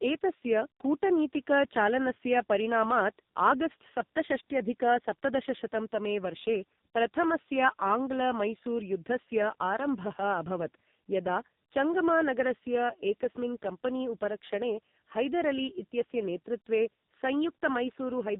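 Tandem speech coding runs through the whole clip. The speech was passed through two speech codecs in a row. It went through a CVSD-style delta-modulation link and a G.711 A-law hop, and then through a low-rate AMR-NB coder, with the rate sounding close to 5.9 kbit/s. Each stage re-encoded audio already damaged by the one before, so the errors stack. The result is rough, muffled and warbly, with nothing above 3.8 kHz.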